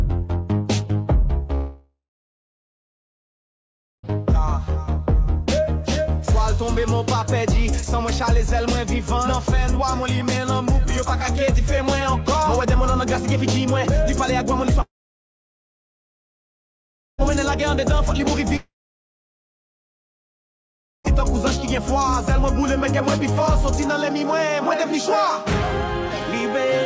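Long network dropouts at 1.55–4.11 s, 14.82–17.21 s and 18.56–21.07 s: each time the sound smears into a brief fading buzz, falls silent for over two seconds, then resumes with roughly 2.4 s gone, likely from lost packets on a call path whose band stops at 8 kHz.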